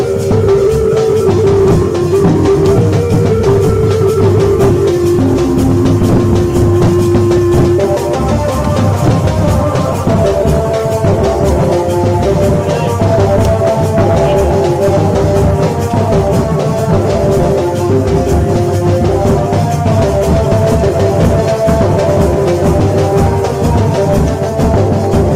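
From 9.84 to 11.84 s, an adaptive stream at a lower bitrate roughens the sound, consistent with Opus dropping from 64 to 24 kbit/s; unlike a dropout, nothing goes silent.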